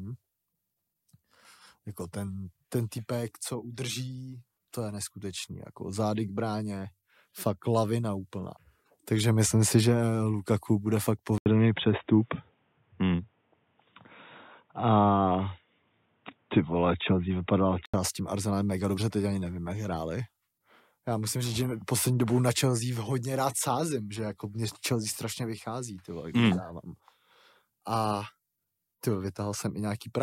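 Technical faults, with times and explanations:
11.38–17.94 s, input switched to a poorer device: the speech suddenly loses everything above 3.8 kHz and turns dull and boxy, with a short 80 ms silence at the switch, a level shift of around 5 dB, and a new noise floor roughly 45 dB below the speech. The likely cause is the recording input changing mid-take to another microphone or a headset's call profile, whose narrower band, own tone and own noise persist until the full-band sound returns at 17.94 s.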